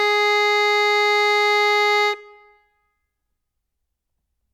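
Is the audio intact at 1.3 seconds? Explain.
Yes, the music plays through 1.3 seconds without any dropout, click, distortion or other fault.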